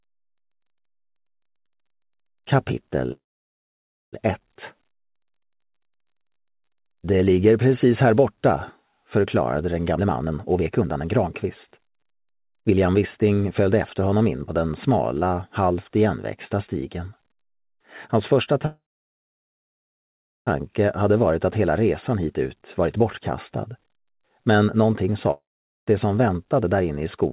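At 3.12 s the sound stops moving for about a second, until 4.15 s. The last bit is drawn out into a fading fill that goes quiet for most of the stretch. It then picks up right where it left off with nothing lost, which sounds like a call audio freeze, likely packets held up and an empty jitter buffer.

From 9.92 to 14.03 s there's a jitter buffer speed-up. The receiver snips out short pitch-period slices over and over to shed roughly a second of backlog. That pushes playback to 125% at unchanged pitch, so it clearly sounds hurried.

A second freeze runs from 18.65 to 20.49 s. It's the same fading hold, with about 1.7 s of quiet inside a 1.8 s gap, and again it resumes intact.

Another speed-up from 22.18 to 24.39 s runs at 108%, trimming about 0.2 s.

Then from 25.31 to 25.88 s comes what sounds like a long network dropout, likely caused by audio that never arrived. There's a fading fill going mostly silent, then the audio returns with 0.76 s of it gone.

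A last brief speed-up at 110% runs from 26.47 to 26.82 s.

Throughout, the call path cuts off everything above 4 kHz, which fits G.711 A-law at 64 kbps.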